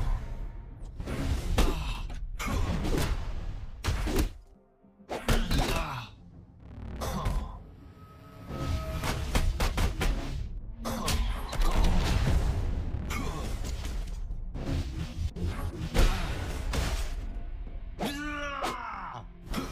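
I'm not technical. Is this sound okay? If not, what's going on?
Yes, no faults are audible.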